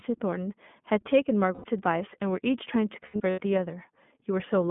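The whole speech clip passes through the iLBC codec, whose damage is plainly audible: a rough, slightly synthetic voice confined to roughly 150 Hz to 3.5 kHz. That fits iLBC's 20 ms frame, 15.2 kbps mode. A spectrogram shows a hard ceiling near 3.5 kHz with empty space above.

Lost iLBC frames appear first from 1.54 to 1.66 s, a 100 ms gap that the decoder bridges by repeating the last pitch cycle with added noise. It sounds like a held, buzzy vowel. The second loss, from 3.06 to 3.41 s, totals 200 ms scattered in bursts of around 70 ms at most. Because each frame decodes independently, clean speech resumes immediately. On the spectrogram these patches show frozen, repeating harmonic stripes, and the waveform shows periodic, fading cycles.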